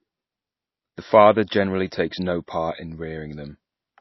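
From start to finish the speech has a hard ceiling, with nothing above 5.8 kHz, and a plainly audible watery, swirling texture. The likely cause is heavy MP3 compression. Short of bits, the encoder cut the treble at a fixed frequency and discarded weaker spectral lines, which flicker on and off between frames. That produces the swirl and dull, smeared onsets, a degree of damage that points to a very low bitrate, around 24 kbps.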